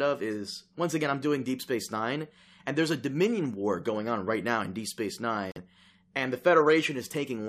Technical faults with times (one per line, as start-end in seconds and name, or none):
5.51-5.58 corrupt frame muted